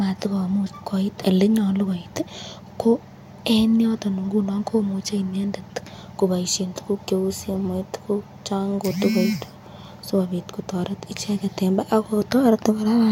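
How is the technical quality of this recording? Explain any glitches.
Nothing in this recording stood out as a technical problem on listening.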